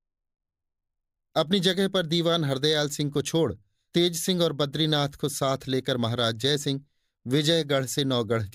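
No technical faults can be heard anywhere in the speech.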